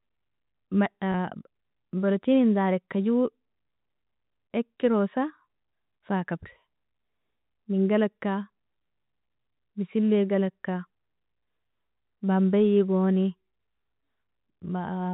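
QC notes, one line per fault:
1.12 to 1.14 s, packet loss with pitch repetition: About 20 ms of audio drops out, which fits a single lost 20 ms packet. The receiver fills the hole by repeating the last pitch period. The gap is too short for this copy to fade away. So the sound briefly holds still with a slight buzzy, sustained quality before normal speech resumes. Through the G.711 telephone path, everything stays band-limited below 4 kHz.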